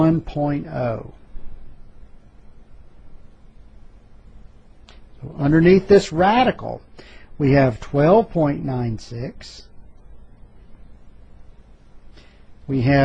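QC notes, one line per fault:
Nothing in this clip calls for a QC line. There is no point in the audio where a fault can be heard.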